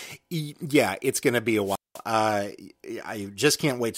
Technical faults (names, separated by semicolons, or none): wireless microphone squelch dropout